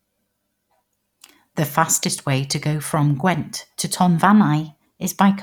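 From 4.25 s to 5.10 s the speech runs about 5.9% fast and sits roughly a semitone (99 cents) sharp, then snaps back. This is a drift correction step, likely clock-matching software briefly speeding playback to drain its buffer. Unlike gradual wow, the change is abrupt.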